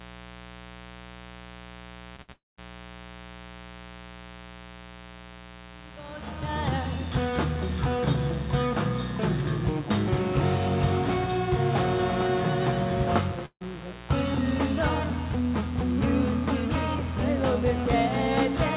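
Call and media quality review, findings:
Mains buzz, entire clip: steady raspy 60 Hz buzz at about 15 dB below the programme. Probable dimmer, rectifier or unshielded run injecting switching spikes twice per cycle; harmonics stack up through the band. Content stops at 4 kHz, consistent with a G.711 mu-law call path.

Short concealed packet loss, 2.16–2.20 s: brief smear. Jitter buffer missed about 20 ms of audio; decoder extended the preceding sound for 16 ms, then crossfaded back.

Burst of packet loss, 2.22–2.30 s: held continuation of the last sound for 62 ms, tapering in level, covering 60 ms of missing audio. Packets lost or late past the playout deadline. Audio resumes further on.

Burst of packet loss, 13.46–13.63 s: 150 ms concealment fill fading out, last 80 ms silent, 160 ms of audio missing. Same receiver-side mechanism, longer gap; the audio picks up past the lost section.

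Long network dropout, 2.32–2.60 s: 256 ms continuation of the last sound fading out, last 190 ms silent; 260 ms of audio never played. Likely cause is a stall in network delivery. Follows directly on the two losses at 2.16 and 2.22 s, forming one damaged stretch from 2.16 to 2.60 s.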